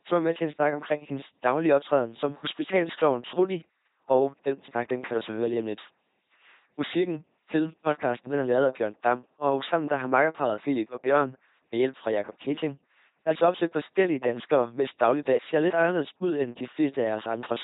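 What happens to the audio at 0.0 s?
From the first instant, and throughout, the speech passes through an LPC-10 vocoder. A pulse-or-noise excitation drives a short all-pole filter, giving buzzy robotic speech, nothing above 3.8 kHz, consistent with 2.4 kbit/s.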